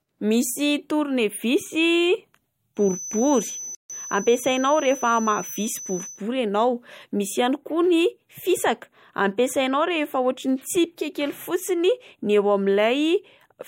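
From 2.74 to 6.23 s a thin, steady 6 kHz feedback whistle sits well below the speech, swelling and fading slowly. A loudspeaker-to-microphone loop held at the edge of feedback is the likely cause. At 3.75 s the speech drops out for about 148 ms, until 3.90 s. This playback stall likely came from the player running out of data or being blocked. From 3.90 to 5.38 s the speech runs hurried at normal pitch, about 1.1 times speed. This time-compressed catch-up trims the backlog by cross-fading out small pieces.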